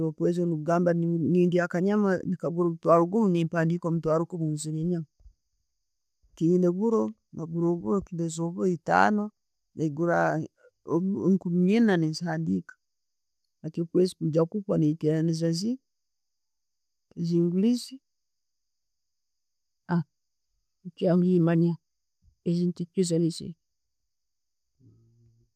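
A speech recording with nothing technically wrong to point out anywhere in it, so there are no faults, times or causes to report here.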